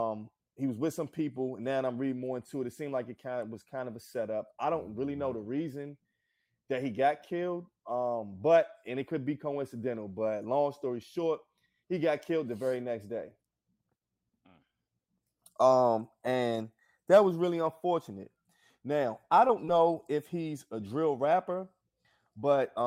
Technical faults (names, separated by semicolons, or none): short concealed packet loss